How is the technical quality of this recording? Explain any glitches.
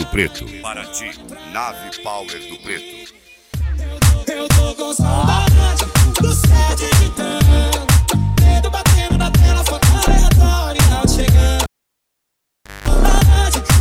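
The recording has one glitch, a cable pulled and plugged in, from 11.63 to 12.88 s. A pop marks the disconnection. Near silence follows for about 1.2 s. As the plug goes back in, only its tip touches first, giving 0.2 s of 50 Hz mains buzz. A second pop brings the sound back.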